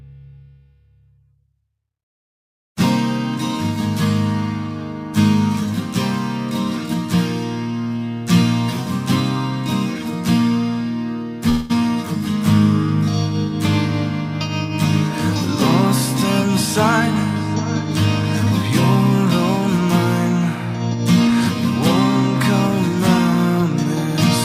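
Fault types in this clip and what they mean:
Call audio freeze: At 11.49 s the sound stalls for about 0.2 s, up to 11.72 s, and the gap is filled with a fading continuation of the last bit of audio instead of silence. The likely cause is packets stuck in transit that emptied the jitter buffer. When they arrived, playback resumed from exactly where it stopped, so nothing is lost, but everything after that point runs roughly 203 ms later than before.
Jitter buffer speed-up: From 20.94 s to 21.31 s the audio briefly rushes at about 109% speed while the pitch stays put. The receiver had built up more buffered audio than it wanted, so it trimmed it back by snipping out tiny pitch-period-sized chunks over and over, somewhere around 40 ms in total. You hear it as a short, hurried stretch rather than any obvious cut.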